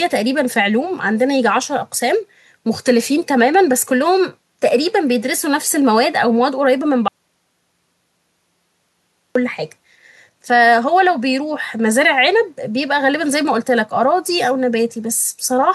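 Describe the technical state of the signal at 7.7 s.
At 7.7 s the signal sits inside an audio dropout to silence running from 7.08 to 9.35 s, about 2.27 s of speech lost. The input likely disconnected or muted while recording continued, so the file holds silence. The speech cuts off abruptly and returns just as suddenly. Unlike a natural pause or a noise gate closing, no room tone or hiss remains in the gap, and there is no gradual fade at either edge.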